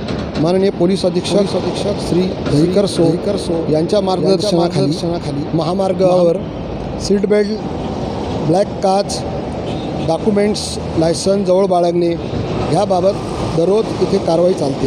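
From 1.27 s to 6.29 s a doubled audio track appears: a full-band copy trails about half a second behind, roughly 5 dB quieter, likely from a second, slower capture path. It starts and stops abruptly, and the waveform and spectrogram show every event repeated at that fixed offset, with no decay.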